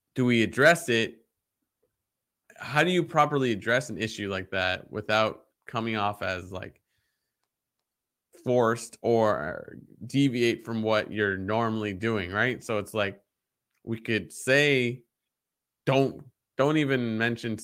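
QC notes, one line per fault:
No faults to note.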